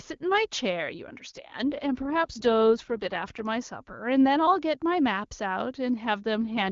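At 1.35 to 3.45 s and again from 6.48 s, an AMR rate drop, fitting 8.85 kbit/s, turns the speech raspy and synthetic. The spectrogram keeps its full band with no gaps, but the harmonics smear.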